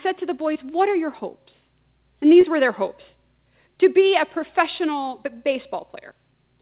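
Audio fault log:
0.54–0.57 s and 2.41–2.45 s, short concealed packet loss: about 20 ms went missing after "to the" and before "were their hopes", and was patched over, leaving brief smears.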